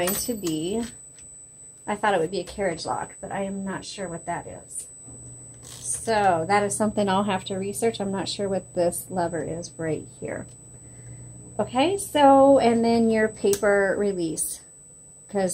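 USB whine runs through the whole recording: current drawn by the USB bus in 125-microsecond microframes is leaking into the audio path through the shared power or ground, and that 8 kHz repetition rate turns into a steady, fixed-pitch tone. It sits at 8 kHz, strongest right there, and roughly 25 dB below the signal, so it stays audible as a thin, high whine behind the audio from start to finish.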